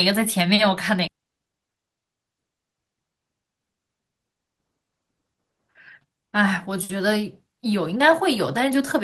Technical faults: skip ahead; jitter buffer speed-up

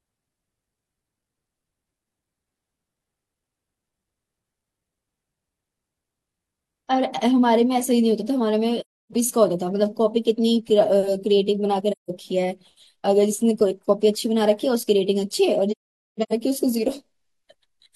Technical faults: AAC frame loss with muting

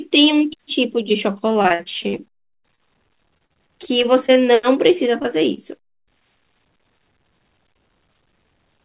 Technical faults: repeated packet loss (robotic sound); short concealed packet loss; jitter buffer speed-up

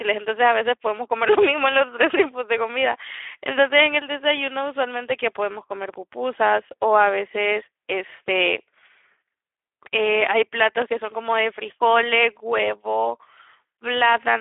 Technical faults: Speex codec

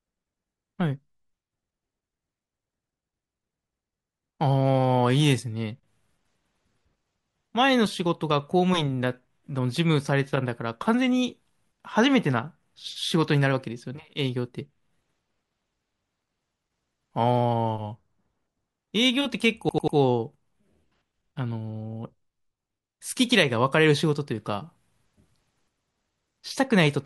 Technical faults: repeated buffer

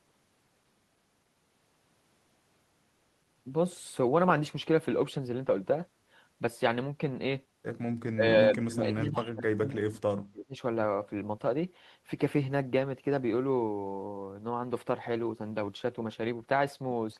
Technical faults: speech suppressed in double talk

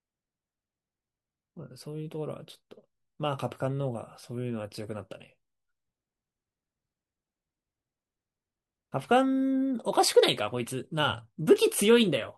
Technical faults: none

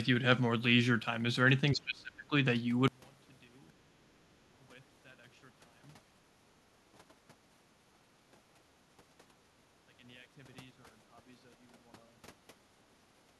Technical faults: speech suppressed in double talk; one channel inverted

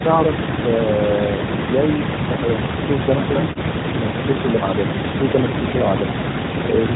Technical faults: none

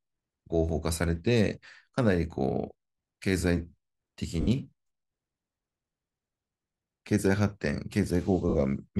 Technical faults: lost LE Audio frames

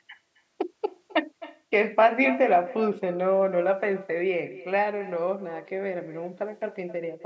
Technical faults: echo with no canceller

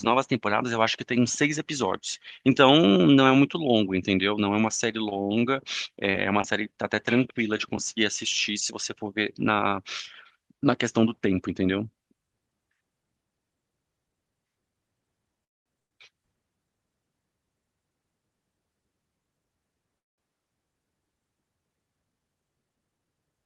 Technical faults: repeated packet loss (robotic sound); call audio freeze

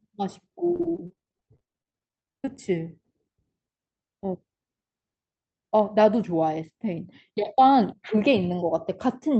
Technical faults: repeated packet loss (robotic sound)

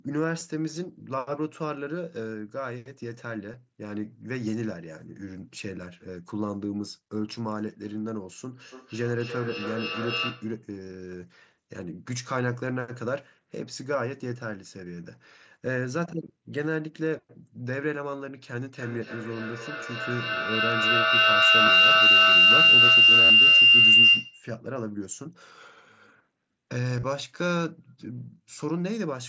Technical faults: concealed Bluetooth headset packet loss; feedback echo between two devices; feedback howl

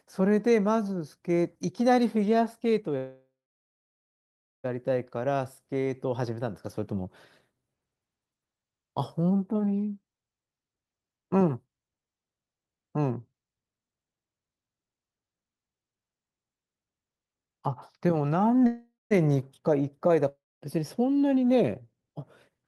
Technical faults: call audio freeze; jitter buffer speed-up; long network dropout

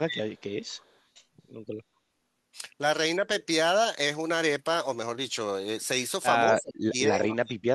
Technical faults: speech suppressed in double talk; echo leak

